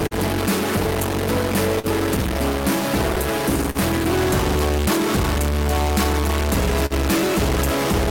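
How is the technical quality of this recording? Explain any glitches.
The recording is compromised by three faults: noise or distortion throughout, recurring timing hiccups, and four brief held-sound stalls.

A stuck bit is the likely cause of the noise or distortion. One data bit seems pinned at a fixed value, so about half the samples are pushed off by that bit's weight. The result is grainy noise or harsh, buzzy distortion on everything, depending on which bit is stuck, and pauses fill with noise instead of going quiet.

The clock drift between sender and receiver is present for the whole clip. The sender's audio clock runs roughly 3 percent slower than the receiver's, so the jitter buffer keeps draining and the receiver repeatedly patches the gap. This produces small timing hiccups at uneven intervals throughout.

A short stall from a late packet occurs at 0.07–0.14 s, 1.79–1.87 s, 3.70–3.78 s and 6.86–6.93 s. 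Each time a packet missed its slot, the buffer ran empty and the receiver stretched the last sound by about 37 to 46 ms before resuming. Nothing is lost, but the sound hangs briefly with a slight buzz or dip.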